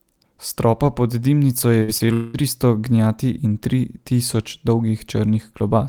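Short concealed packet loss at 1.79 to 1.83 s, right after "stropa pod dimnico je": about 20 ms of audio failed to arrive in time, and the receiver patched the hole by extending the preceding sound for roughly 18 ms before blending back. It comes across as a brief smear.

A burst of packet loss follows immediately, from 1.83 to 1.90 s. About 40 ms in a row went missing, and the decoder carried the last sound forward for about 46 ms while fading it, giving a short held buzz or hiss before the audio resumes.

Short concealed packet loss recurs at 1.98 to 2.01 s, where another roughly 20 ms gap is filled with about 15 ms of continued sound, heard as a quick wobble.

Long network dropout, 2.13 to 2.36 s: for about 200 ms the sound turns into a continuation of what came before, filled for roughly 204 ms with no true silence, before "tristo gnjati in tri" returns. This is likely a stretch where no audio reached the receiver, leaving only concealment in place of the missing content.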